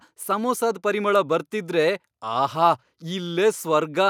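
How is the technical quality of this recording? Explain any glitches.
Nothing in this speech recording sounds like a glitch, so there's nothing here that needs explaining.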